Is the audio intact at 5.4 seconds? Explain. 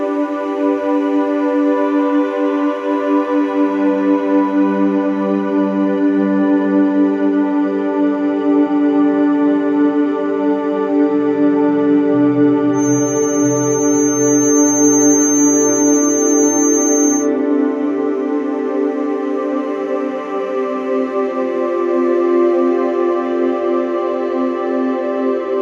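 Yes, the audio is intact at 5.4 seconds, with no dropout, click, distortion or other fault at that point.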